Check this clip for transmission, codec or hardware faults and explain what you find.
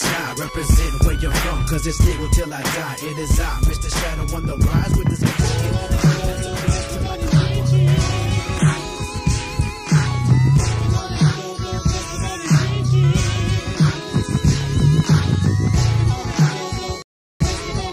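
Two faults are audible, one hardware-type and one from delivery.

Loud pop, 1.01 to 1.03 s: a single sharp pop rises a few dB above the surrounding sound, which continues beneath it. It is likely caused by a sudden voltage step or pulse, such as a switch, static discharge or driver glitch, entering the signal path.

Rebuffering stall, 17.02 to 17.41 s: the audio drops to silence for about 0.38 s, then resumes exactly where it left off. The player exhausted its downloaded audio and paused until more arrived, so nothing is missing but the clip gains that extra time.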